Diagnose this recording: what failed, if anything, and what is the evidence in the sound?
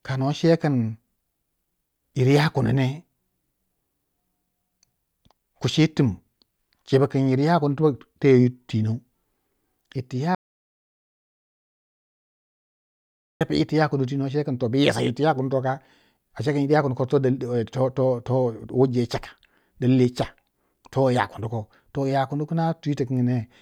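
An audio dropout to silence runs from 10.35 s to 13.41 s, removing about 3.06 s of speech. The sound stops abruptly mid-flow and resumes just as abruptly, and the gap is silent with no room tone or noise floor. That points to the capture stage, likely a lost input device or link while the recorder kept writing samples. A noise gate or packet-loss concealment would fade, leave residual noise, or fill the gap with smeared or repeated sound.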